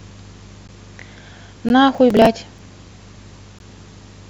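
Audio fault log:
0.68, 1.69, 2.58 and 3.59 s: gap between stream segments. Silent holes about 4 to 16 ms long recur every 1.0 s where segment time stamps fail to meet, so the sound stops abruptly and resumes. A spectrogram shows thin vertical blank stripes; the waveform shows flat, hard-edged breaks.
1.95 to 2.26 s: processor overload crackle. Roughly fifteen buffers of about 10 ms each miss their deadline and are skipped, so the sound jumps forward in tiny hard-edged steps, heard as gritty tearing. A spectrogram shows broadband vertical clicks; the waveform shows jagged discontinuities.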